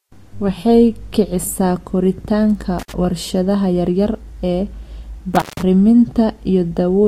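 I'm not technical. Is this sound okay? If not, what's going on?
No. A loose cable or plug in the recording chain briefly lost its connection twice, a fault called intermittent contact. Each time the line opened, the speech cut out, with a crackle as the connection broke and came back and faint hiss in between. The first dropout is around 2.79 to 2.92 seconds, with a gap of about 56 milliseconds. The second, around 5.35 to 5.63 seconds, is longer, about 158 milliseconds.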